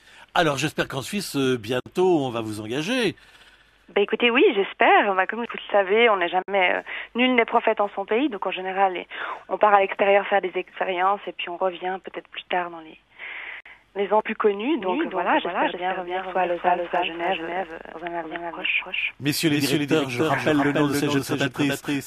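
At 1.80 s, 6.42 s and 13.60 s there is a gap at a join of encoded pieces: silences of about 58, 58 and 52 ms. Separately encoded segments were joined with their encoder start delay and final-frame padding left in, so the sound drops out and resumes where it stopped.

From 14.81 s to the end, the audio is doubled: a full-band copy, roughly 5 dB quieter, trails about 0.3 s behind, with no decay or room colour. The likely cause is a second, slower capture path.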